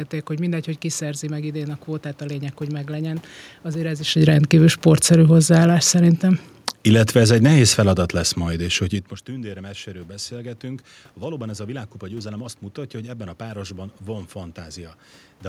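From 4.06 s to 8.82 s the automatic gain falls: the control finds the input too loud or its background noise too strong and lowers its gain by about 10 dB, so speech and room noise sink together. The waveform envelope tapers, and the spectrogram darkens in every band, background included.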